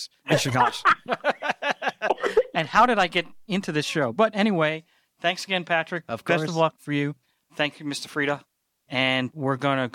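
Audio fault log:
Nothing stood out on listening to this speech recording.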